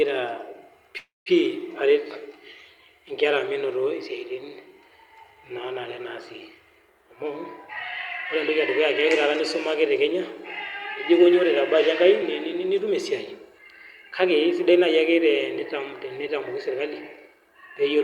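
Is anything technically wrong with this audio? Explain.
Yes. From 0.97 to 1.29 s there is a call audio freeze. The last sound stretches into a fading buzz, then about 180 ms of silence, and the speech resumes where it stopped. Unlike a dropout, nothing is lost: around 287 ms of gap is inserted, likely because delayed packets let the jitter buffer run empty.

Jitter buffer speed-up runs at 11.18 to 13.59 s (105%), 14.30 to 15.61 s, and 16.29 to 17.47 s (each 104%). Removing tiny pitch-period slices trims roughly a tenth of a second, then about 50 ms twice, to shed excess buffered delay. The speech in the first stretch sounds hurried, but its pitch stays put, unlike a resampling error.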